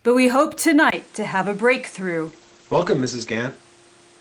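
A speech clip whose sound turns duller at 0.90 s, right after "but we hope", with a 20 ms gap at the join, most likely an input switched to a poorer device. From there the spectrogram shows nothing above 10.5 kHz, a new noise floor sits roughly 30 dB under the speech, and the waveform's level stays about the same. A call bitrate drop then runs from 2.28 to 3.61 s: the rate falls from 32 to 11 kbps and stays at its lowest for 1.12 s, so coding turns coarse. The encoder's band narrows from 20 kHz to 8 kHz, so on a spectrogram the top edge drops from 10.5 kHz to 8 kHz for that stretch, then returns.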